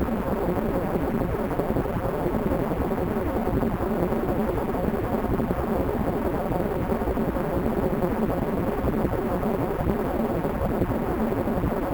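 From start to end, these everyday sounds carry imaging from sample-and-hold upsampling. The band above 8 kHz holds a mirrored copy of everything below it, about 26 dB down, which fits a 16 kHz source raised to 44.1 kHz by repeating samples with no smoothing filter. It is heard as a metallic fizz that rises and falls with the sound. Unlike hiss, it vanishes in silence.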